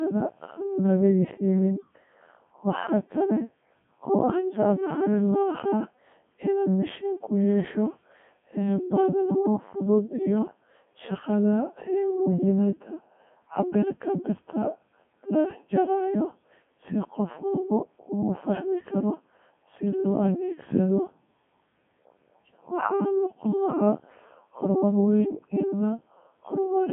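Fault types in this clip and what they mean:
Codec 2 vocoder: The speech is rebuilt from sine waves carrying only pitch, voicing and spectral envelope, so it sounds robotic and buzzy. The band is narrow, roughly 150 Hz to 3.5 kHz, and the codec runs at 3.2 kbit/s.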